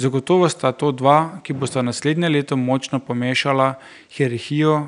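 No technical faults detected.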